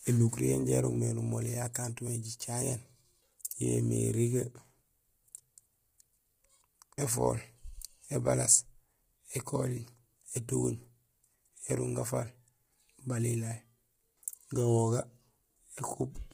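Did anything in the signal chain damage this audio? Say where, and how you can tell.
Yes, the codec stage: the speech is rough and grainy throughout with nothing above 15.6 kHz, likely low-delay AAC compression whose short frames smear harmonics at a low bitrate.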